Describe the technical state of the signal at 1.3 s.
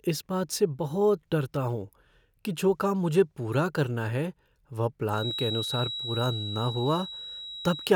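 At 1.3 s the speech signal is intact, with no audible fault at that moment.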